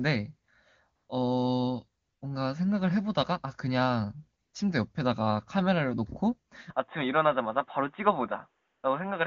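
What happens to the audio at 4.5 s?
At 4.41 to 4.53 s the phone's voice activity detection treats the talker as silent, so for about 120 ms no speech frames are sent and the receiver substitutes AMR comfort noise built from a rough estimate of the background's level and spectrum. The genuine room sound briefly gives way to a smooth, even hiss that switches in and then back out.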